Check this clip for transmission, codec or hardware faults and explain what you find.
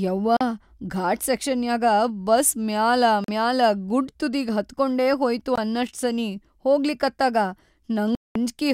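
Four short gaps cut into the speech, all from one fault. Bluetooth dropout, at 0.37–0.41 s, 3.24–3.28 s, 5.56–5.58 s (between "ತುದಿಗಿ ಹತ್ಕೊಂಡೇ ಹೋಯ್ತು" and "ಅನ್ನಷ್ಟ್ ಸನೀ ಹೋಗ್ಲಿಕತ್ತಾಗ") and 8.15–8.36 s, likely arises when wireless audio packets arrive too late and are discarded. Output falls silent for about 41, 41, 20 and 203 ms, lengths that fit whole lost packets of roughly 20 ms each. Speech then resumes further along, as though it had continued underneath.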